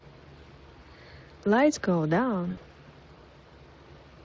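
Throughout the speech, the Speex codec leaves plainly audible damage. This CELP coder models the voice as a filter driven by an excitation signal. With limited bits for that excitation, the result is a hoarse, noisy grain rather than clean harmonics, which fits a bitrate of around 20 kbps. Unlike a transient fault, it colours every part of the speech. It is a steady texture, not a single event.

From 2.51 to 2.61 s, VoIP packet loss is concealed by the speech codec. About 60 ms of audio went missing, which fits three lost 20 ms frames. The decoder filled the gap by extending its last pitch and filter settings at falling gain, so the sound smears into a buzzy tone or coloured noise that fades instead of dropping to silence. What sets it apart from a plain dropout or a click is that synthetic tail, and because each rebuilt frame feeds the next, the voice stays weak or distorted just after 2.61 s.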